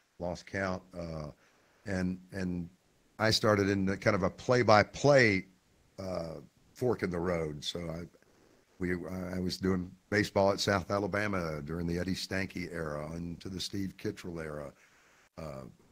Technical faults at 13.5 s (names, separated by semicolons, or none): none